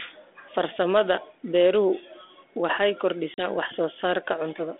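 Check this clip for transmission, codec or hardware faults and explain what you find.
One transmission fault appears, a packet loss on an ADPCM call, carried over G.726 ADPCM at 32 kbit/s, whose 300 Hz to 3.6 kHz band and faint coding roughness can be heard throughout.

From 3.34 to 3.43 s, about 40 ms of data, roughly two packets, went missing and was filled with silence. The decoder's adaptive predictor and step size lost track of the sender's, so after the abrupt gap the speech comes back slightly distorted before settling.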